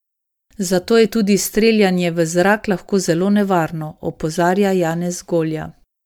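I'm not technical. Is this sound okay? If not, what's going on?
No. Throughout the speech it sounds swirly, smeared and hollow, with the starts of sounds blurred. That is generation loss, most likely from being saved as MP3 about five times over, each save adding fresh damage on top of the last.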